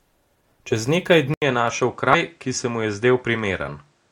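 Input switched to a poorer device, likely, at 1.34 s: after an 80 ms silence the speech loses everything above 9.8 kHz and gains a faint new noise floor, at unchanged level. Damaged data in a compressed stream at 2.13 s: corrupted frames make the decoder lose sync, producing a brief blip.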